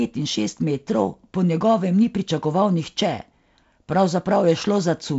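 Nothing stood out on listening to this speech, which comes over a G.722 wideband telephone link with content reaching up to about 7.7 kHz.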